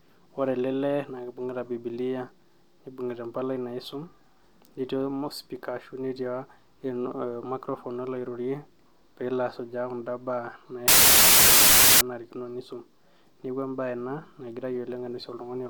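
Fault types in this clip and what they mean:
Samples built from the wrong bytes: from 10.88 to 12.01 s the speech is replaced by loud, harsh broadband noise, because each sample's bytes were assembled in the wrong order or alignment, so the rapidly changing low bits became the dominant part of every value.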